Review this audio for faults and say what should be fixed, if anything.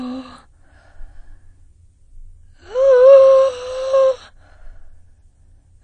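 The music runs dull from start to finish. Nothing reaches above about 9.8 kHz, so the top octave is missing. The texture is smeared, and the codec damage is plainly audible throughout. The likely cause is AAC compression, AAC-LC at a low bitrate that points to around 32 kbps. At that rate the encoder cannot afford the high bands. It lowers its cut-off and quantises the remaining spectrum coarsely. To prevent it, encode music at a higher bitrate or keep a lossless copy.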